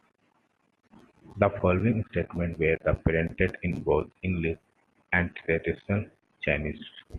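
Nothing technically wrong can be heard in the speech recording, which holds steady throughout without any audible dropouts, distortion or interruptions.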